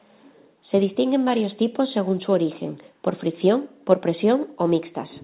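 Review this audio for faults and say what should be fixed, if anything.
Nothing here needs fixing; the speech comes through a call path that leaves nothing above 4 kHz, as expected of telephone-band coding.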